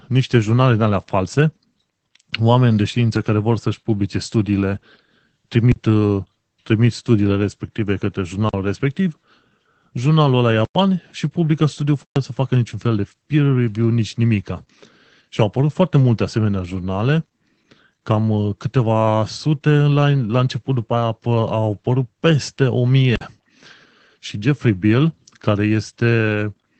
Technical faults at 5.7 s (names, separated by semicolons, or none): Opus voice compression; block of digital silence